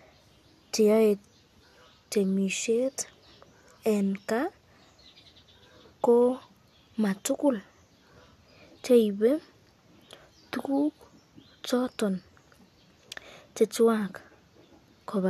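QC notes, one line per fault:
No audible faults found anywhere in the speech.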